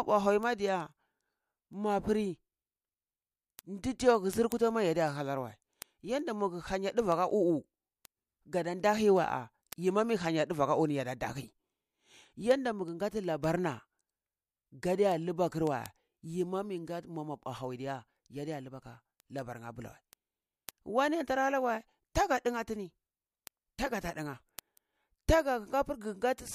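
A receiving device running on its own unlocked clock slips a sample against the digital link, producing word clock ticks about every fifth of a second from 0.25 to 26.45 s.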